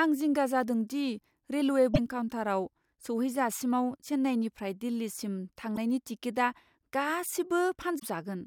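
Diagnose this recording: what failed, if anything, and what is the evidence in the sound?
Damaged data in the compressed stream threw the codec's decoder out of frame sync, causing brief disruptions at 1.91–1.99 s after "दि रेलवे", 5.76 s after "चेन्नाईनिफ्राय दिल्लीसिम", and 7.96–8.03 s.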